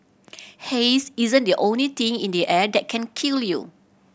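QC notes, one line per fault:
No faults found in this speech clip.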